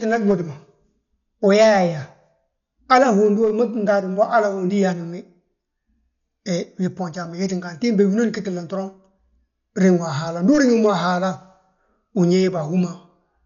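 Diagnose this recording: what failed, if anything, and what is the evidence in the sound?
The codec stage failed, and Dolby Digital compression is the likely cause. The damage runs through the whole recording. The speech is dull, with nothing above 7 kHz. The voiced sounds carry a rough, fluttering noise around them. That points to a starved encoder, which fits a rate around 48 kbps. It narrowed the band and left many frequency lines without mantissa bits. The decoder then filled those gaps with dither noise, which produces the flutter.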